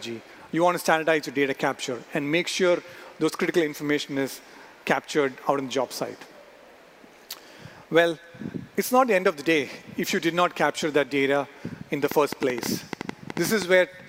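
The audio has a corrupt frame decoded from 5.93 to 5.96 s: a single damaged compressed frame was played anyway, briefly putting energy at wrong frequencies. A train of clicks runs from 12.06 to 13.63 s, around fifteen irregularly spaced pops at about 9 per second, roughly 15 dB above the surrounding sound, likely from electrical interference or a faulty connection or power supply.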